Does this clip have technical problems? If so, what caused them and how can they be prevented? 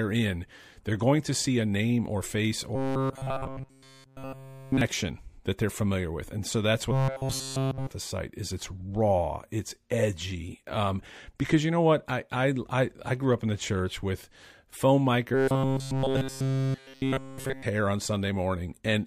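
Yes. Robotic sound from repeated short buffers occurs at 2.75–4.81 s after "a name or face", 6.92–7.88 s between "so that's" and "the site is it's", and 15.34–17.63 s before "hair on". Essentially all the audio there is one short chunk, about 7.5 ms, looped over and over. That most likely happens because new audio arrived too slowly. The loop imposes a fixed 134 Hz metallic buzz. The waveform shows identical repeating cycles, and the spectrogram shows flat, evenly spaced harmonic lines at multiples of 134 Hz. A larger jitter buffer and a steadier network or processing path would prevent it.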